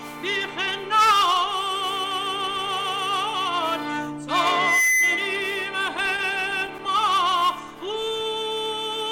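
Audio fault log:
4.43–5.48 s, loudspeaker feedback squeal: A steady tone at 2 kHz rises out of the sound and swells over roughly 0.4 s until it stands about 5 dB above the programme level. The microphone is picking up the loudspeaker it drives, and at 2 kHz the loop gain exceeds unity, so that single frequency keeps reinforcing itself. It holds as a squeal for the rest of the span before it stops.
5.97–7.44 s, repeated stalls (stutter): Across this span the audio hitches over and over, with more than a dozen brief stalls, the longest about 14 ms. The receiver's jitter buffer kept running dry because packets arrived late, and at each underrun the last sound was extended until fresh data came in. In total about 139 ms is filled this way, roughly a tenth of the span. Nothing is lost, but the flow drags and catches repeatedly.
7.88–8.40 s, jitter buffer slow-down: The sound stretches out at unchanged pitch, playing at about 93% speed. 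With its reserve low, the jitter buffer rebuilt it by repeating single pitch periods and fragments of pauses several times in a row, adding about 43 ms over half a second. Because whole periods are duplicated rather than resampled, the pitch stays put while sounds are drawn out.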